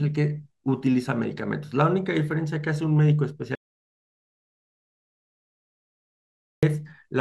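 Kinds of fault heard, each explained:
Audio dropout to silence: from 3.55 to 6.63 s the speech cuts off mid-flow and about 3.1 s of silence follows, likely from a lost input link. Unlike a natural pause or gated quiet, no room tone remains, and speech resumes abruptly.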